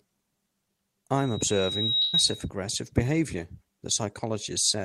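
From 1.17 s to 2.49 s a loudspeaker feedback squeal builds over roughly a second into a 3.8 kHz tone, ending well above the speech; the spectrogram shows one bright, thickening horizontal line. From 2.01 s to 2.15 s, a burst of packet loss is concealed by about 117 ms of held, fading sound, with about 120 ms of speech missing; the waveform smears into a decaying repeat with no silent gap.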